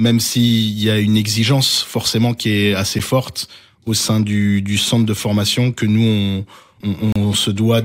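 A speech clip with two gaps at a join of encoded pieces: brief silences at 2.99 s, between "forcément qui est assez" and "forte au sein du", and 7.12–7.16 s, left by untrimmed encoder delay and padding.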